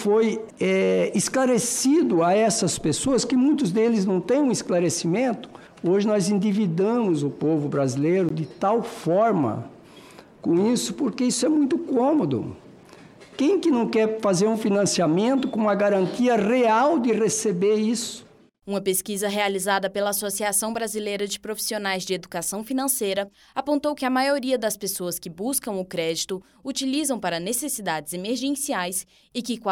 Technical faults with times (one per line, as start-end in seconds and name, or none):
8.29 block of digital silence
20.75 block of digital silence